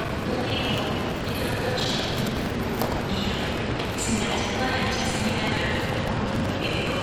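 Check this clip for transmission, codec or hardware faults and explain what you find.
One fault runs through the whole clip: buffer tearing. The writer and reader of the audio buffer have slipped out of step. Each period, roughly a sixth of the buffer replays audio about a tenth of a second old, with hard joins. This gives a rattling buzz near 21.5 Hz, which fits a 2048-sample buffer.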